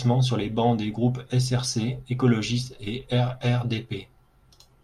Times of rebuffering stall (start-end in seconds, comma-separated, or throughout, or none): none